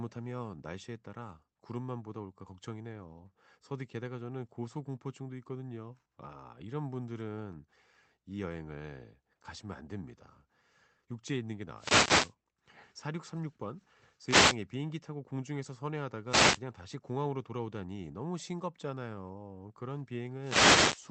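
Wireless microphone noise hits break into the speech four times: 11.75 to 12.34 s, 14.24 to 14.58 s, 16.28 to 16.60 s, and 20.40 to 21.05 s. Each is a short swish of static. The FM radio link fades as reflected signals cancel, so receiver noise rises and covers the voice. The first and last hits last over half a second. The two middle ones are about a third of a second.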